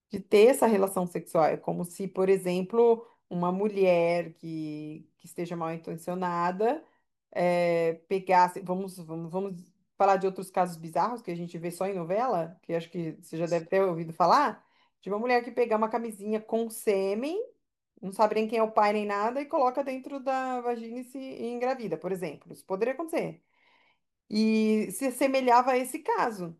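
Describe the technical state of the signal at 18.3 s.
At 18.3 s the speech signal is intact, with no fault to be heard at that moment.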